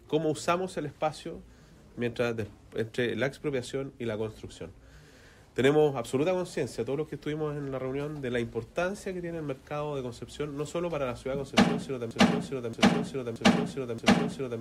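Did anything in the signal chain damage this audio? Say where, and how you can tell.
Yes. From 12.11 s to the end of the clip, the same 0.63-second fragment repeats exactly, back to back, four times with no variation, a broken-record loop. Whatever should have followed 12.11 s never arrives; it is simply replaced. The likely cause is a stall at the buffer or playback stage: the player or stream stopped receiving new data and kept re-sending the last fragment it held until the clip ended.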